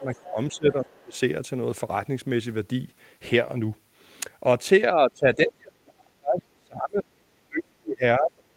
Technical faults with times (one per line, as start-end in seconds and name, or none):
0.00-1.16 speech suppressed in double talk
0.01-0.31 other side's voice leaking through
1.15-1.20 other side's voice leaking through
4.89-8.56 speech suppressed in double talk